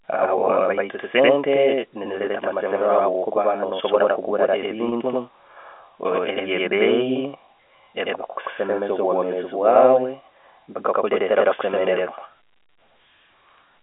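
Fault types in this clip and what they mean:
Channel delay (doubling): One channel lags by about 93 ms, which fits a 4096-sample buffer. The mono sum therefore carries a same-level slap echo of the speech.
Packet loss with pitch repetition: Repeating the last pitch period bridges lost packets. This is heard as brief held buzzes at 2.26 s and at 4.89 s, after "no'sobora okugura".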